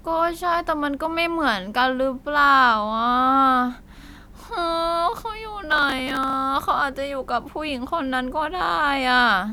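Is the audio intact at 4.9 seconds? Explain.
Yes, at 4.9 seconds the speech runs on without any break, click, dropout or other audible fault.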